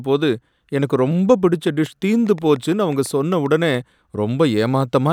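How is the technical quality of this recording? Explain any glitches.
There's one real problem here: a train of clicks running from about 1.67 to 3.75 s. Roughly ten sharp, similar pulses land at an uneven pace, averaging about 4.8 per second, and they peak at around the same level as the speech, so they tick right over it and through the gaps too. The likely culprit is interference from nearby gear or a faulty connection or power supply injecting short pulses into the signal.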